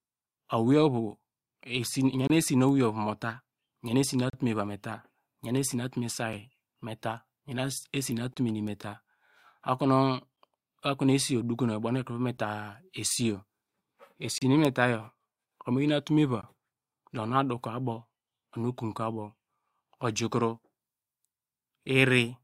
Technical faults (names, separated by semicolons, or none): gap between stream segments